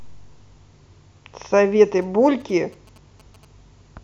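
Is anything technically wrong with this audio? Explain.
Yes. From 2.02 to 3.45 s the speech is overlaid with GSM signalling bursts. A nearby 2G phone is exchanging brief signalling with its network, and the audio circuitry rectifies those radio pulses into sound. The result is a galloping dit-dit-dit of short buzzes with a 217 Hz repetition rate, sitting roughly 30 dB below the speech. Mains hum would be a steady tone at 50 or 60 Hz. This interference comes in clipped, rhythmic clusters and then stops.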